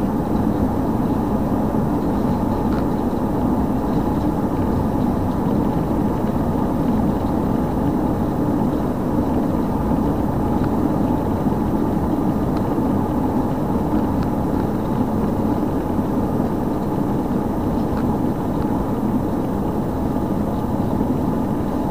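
No technical faults can be heard anywhere in this recording of sounds. Nothing interrupts or disturbs the audio at any moment.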